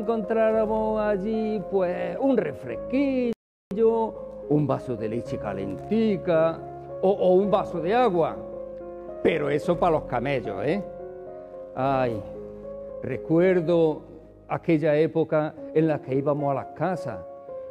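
At 3.33 s the sound cuts to silence for about 380 ms, then resumes at 3.71 s: a playback stall, likely the player starving for data or blocked.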